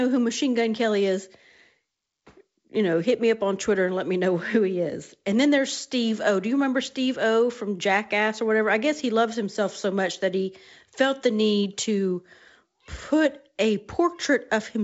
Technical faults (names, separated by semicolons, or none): none